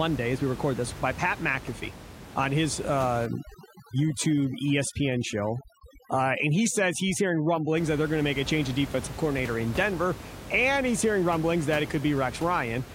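A speech recording with room noise about 14 dB below the voice, and overdone noise removal from 3.26 to 7.77 s. Over that stretch a noise reduction stage set too strong pulls individual frequency bands far down or off whenever they sit near its noise estimate, so the background drops and breaks into twinkling, warbling specks, and quieter parts of the voice vanish with it. On a spectrogram the noise floor turns into scattered isolated dots, with gaps where low-level speech detail should be.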